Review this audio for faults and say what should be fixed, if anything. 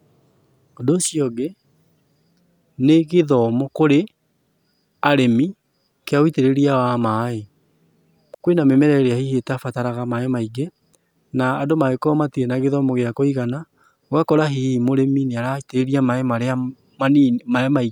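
At 8.34 s to 8.40 s the speech drops into a clean hole of near silence lasting 60 ms, with no click, hiss or noise burst on either side. That signature is a digital wireless dropout: the receiver lost too much of the incoming data stream to rebuild the audio, so it muted the output with a very short fade rather than pass corrupted sound. To prevent it, keep clear line of sight between transmitter and receiver, shorten the distance, and move to a less congested frequency.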